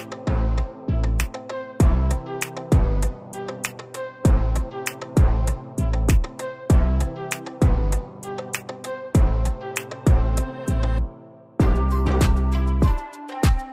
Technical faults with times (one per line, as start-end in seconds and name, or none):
none